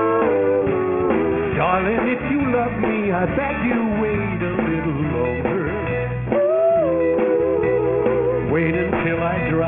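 From start to finish the top of the sound is gritty and metallic, with spurious tones crowding up to a hard edge near 3 kHz. This is aliasing: content above that fold was never filtered out before downsampling, which fits a new rate of 6 kHz, so it reflected back as unrelated frequencies roughly 15 dB below the signal.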